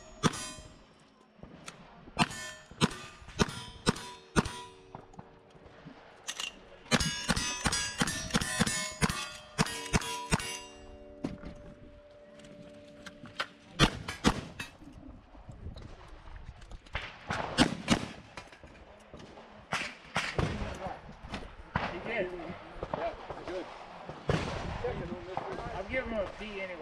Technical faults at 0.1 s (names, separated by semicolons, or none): none